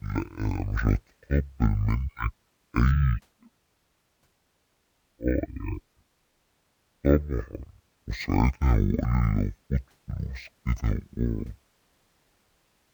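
Throughout, the speech is stereo read as mono. Left and right samples play in sequence as one channel, so everything runs at half speed, an octave low.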